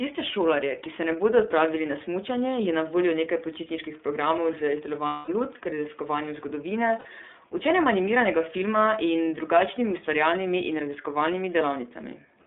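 From start to finish the speech passes through an iLBC codec, and its damage is plainly audible. Everything sits in a narrow telephone band of about 200 Hz to 3.6 kHz, so a spectrogram shows a hard ceiling with nothing above it. The voice sounds slightly rough and synthetic because each 30 ms frame's excitation is coded on its own. The coarseness points to the 13.33 kbps mode.

At 5.06 s, right after "nekaj počitniških programov z", come lost iLBC frames lasting until 5.29 s, about 210 ms. The decoder fills the hole by repeating the last pitch cycle blended with noise, fading as the loss goes on, so it sounds like a held, buzzy vowel. On a spectrogram this appears as flat, unchanging harmonic stripes. The waveform shows a periodic pattern shrinking in level. A shorter loss of about 60 ms follows at 6.99 to 7.06 s and gives a brief buzzy smear. After each gap the voice is right again almost immediately, because every frame decodes independently.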